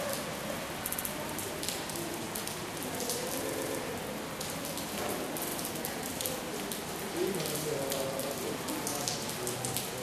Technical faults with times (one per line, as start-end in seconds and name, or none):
0.87-1.07 repeated frames
3.52-3.77 repeated frames
5.46-5.55 repeated frames